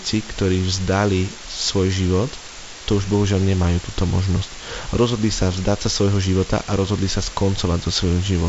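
Low bit depth with dither runs from start to finish. The speech has been reduced to what sounds like about 5 bits, with dither added before rounding, so the quantisation error becomes steady white noise rather than distortion. The result is a constant, even hiss only about 15 dB below the speech, present through pauses as well as words. The wideband telephone coding path stops everything above 7.7 kHz, and its light upper-band noise sits beneath the much stronger hiss.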